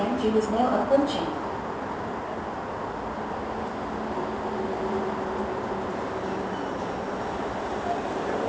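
Aliasing runs throughout: downsampling, apparently to 16 kHz, skipped the anti-alias filter, so content above 8 kHz folds back as gritty, metallic tones, roughly 30 dB down.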